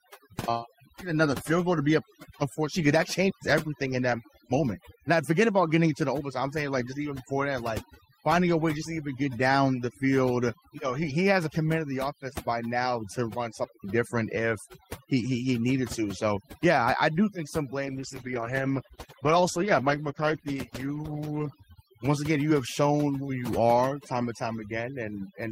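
Overdone noise removal runs throughout: the noise reducer is set too strong, so frequency bands near the noise level are muted along with quiet parts of the speech, leaving a dropped, twinkling background.

A digital wireless dropout at 3.30 to 3.42 s, after "be up unfortunately that" and before "everything in that moment", leaves a clean 116 ms hole. Another at 13.64 to 13.84 s, after "by now to run" and before "different if he he", lasts 200 ms. In both, the receiver lost too much data and muted, with no noise burst on either side.

A call bitrate drop from 17.87 to 21.71 s, after "I do think some" and before "once again you have", makes the speech rough and muffled as the encoder codes more coarsely and trims the highs. This fits a fall from 32 to 13 kbps, holding at its lowest for about 3.8 s.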